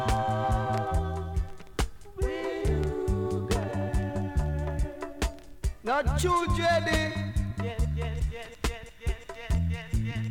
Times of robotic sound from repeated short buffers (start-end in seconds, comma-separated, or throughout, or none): none